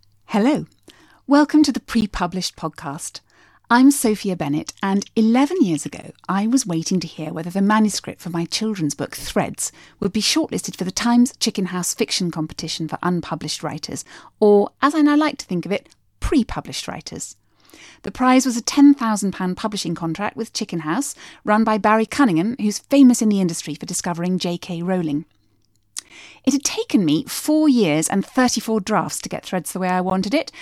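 From early on this speech has a gap between chunks: hard-edged holes of about 13 ms at 2.01, 6.02 (just before "I was waiting"), 10.03 (before "be shortlisted for the"), 14.05 (before "or as I now"), 18.06, 22.07, 26.09 and 30.10 s. That steady 4-second spacing means the audio was joined from 4-second pieces with a sliver of silence at every seam. Nothing's missing, but each join is heard as a brief dropout.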